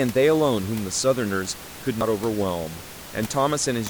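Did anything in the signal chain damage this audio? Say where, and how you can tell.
Yes, at the codec stage: damaged data in the compressed stream gives a short glitch from 2.01 to 2.03 s, where the decoder lost sync. The room noise underneath sits about 16 dB below the speech.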